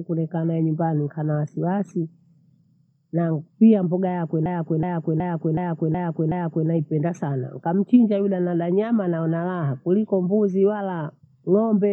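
From 4.46 s to 6.69 s, right after "pia mbogha yakwe", the speech runs into a system hang loop. The host or driver stalled while the audio hardware kept replaying its ring buffer, so one 0.37 s segment repeats exactly six times at about 2.7 Hz. That loop length fits a 16384-sample buffer. Because the segment is long, the result is a slow, rhythmic stutter rather than a buzz. Playback then resumes with essentially nothing missing.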